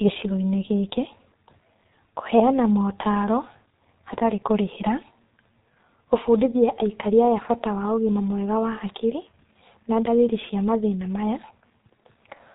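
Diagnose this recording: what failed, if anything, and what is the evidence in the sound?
The failure sits at the codec stage: G.723.1 compression throughout the speech. Nothing passes above 3.8 kHz. Consonants blur and sound hoarse, fitting a heavily damaged, roughly 6.3 kbit/s stream.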